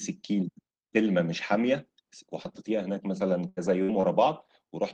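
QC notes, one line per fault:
2.43 to 2.47 s and 4.01 to 4.05 s, short concealed packet loss: around 20 ms of the speech failed to reach the decoder in time at each point, and the receiver covered the hole by extending the preceding sound for roughly 13 ms and 25 ms respectively before crossfading back into real audio. What remains is a brief smear or wobble in place of the missing fragment, and a short consonant falling in the gap may be lost entirely.
3.49 to 3.59 s and 3.83 to 3.91 s, burst of packet loss: two longer dropouts, about 80 ms and 60 ms. The receiver carried the last sound forward while turning it down, so the first run becomes a held buzz or fading hiss lasting roughly 80 ms and the second roughly 60 ms. Playback then resumes further along, and the speech that should have filled each gap is gone.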